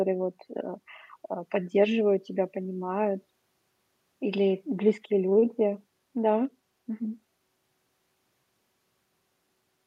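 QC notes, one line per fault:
No faults found.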